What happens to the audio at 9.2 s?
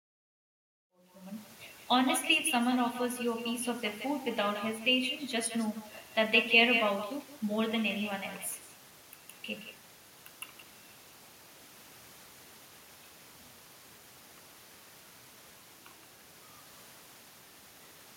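At 9.2 s the speech carries an echo with no canceller: a discrete copy about 10 dB quieter returns roughly 150 ms later, unlike reverb's smooth, diffuse tail.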